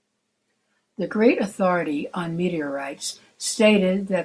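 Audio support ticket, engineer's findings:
No faults found on the speech recording after a full listen. Nothing to escalate; closing as no defect heard.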